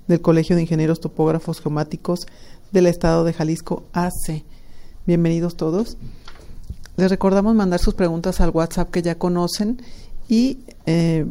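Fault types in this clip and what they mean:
No faults detected; nothing to report.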